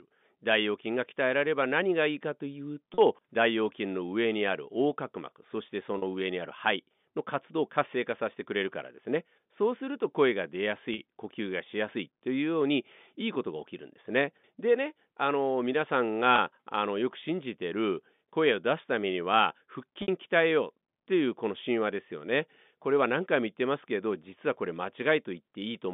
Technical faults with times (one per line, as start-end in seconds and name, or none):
2.94-2.98 packet loss with pitch repetition
5.98-6.02 packet loss with pitch repetition
10.94-10.98 packet loss with pitch repetition
16.36-16.38 packet loss with pitch repetition
20.02-20.08 packet loss with pitch repetition